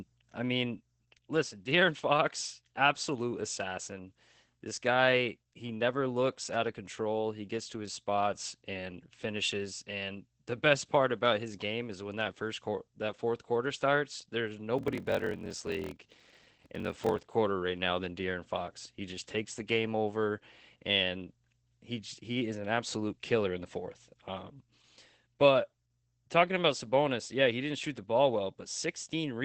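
A speech clip with Opus voice compression throughout. At about 12 kbps the SILK coder keeps only wideband audio, up to 8 kHz. The speech sounds muffled, hoarse and slightly robotic, and the coarse excitation coding is plainly audible. From 14.76 to 17.34 s there is a block size mismatch (padded). Each block arrives short and is topped up with zeros, which fits 1024-sample blocks read as about 1152. This puts a 41.7 Hz buzz over the speech and slows it to 0.889 of normal speed, with little change in pitch.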